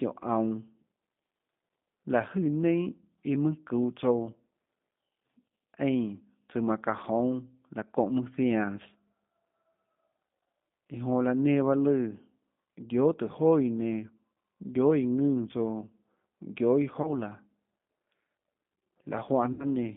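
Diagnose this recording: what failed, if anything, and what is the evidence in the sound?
The codec stage is at fault throughout. The speech has the rough, slightly synthetic texture of G.729, which fits an 8 kbit/s G.729A call leg. The encoder rebuilds each 10 ms frame from a vocal-tract filter, a pitch predictor and a few pulses, and the coarse pulse coding leaves plainly audible damage. The line is confined to roughly 150 Hz to 3.6 kHz. On a spectrogram, nothing sits above 3.6 kHz and the harmonics look smeared between formants.

The network stage fails briefly three times, and the speech codec hides each gap with its packet loss concealment: 5.47 to 5.51 s, 17.02 to 17.11 s, and 19.53 to 19.67 s. The lost spans are 40, 20 and 60 ms, which fits losing two, one and three 20 ms packets. The decoder stretches its last pitch and filter into a buzzy tone or a coloured noise that fades. It then recovers over following frames. 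A waveform shows shrinking amplitude, and a spectrogram shows frozen, blurred harmonics.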